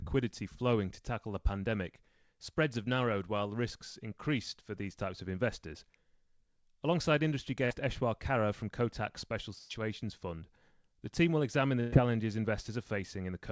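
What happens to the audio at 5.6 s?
At 5.6 s the speech continues intact, with no dropout, glitch or other fault, only the normal band limit of the G.722 call path, which leaves nothing above 8 kHz.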